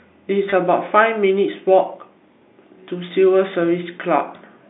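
Packet loss with pitch repetition occurs from 0.50 to 0.52 s, a gap of about 20 ms that fits a single lost packet. The receiver filled the hole by replaying the most recent pitch period of the speech, so instead of a dropout there is a brief held, slightly buzzy tone where the waveform loops on itself before normal sound resumes. Throughout, the narrow telephone band of the G.711 coding remains audible, cutting off below 200 Hz and above 3.7 kHz.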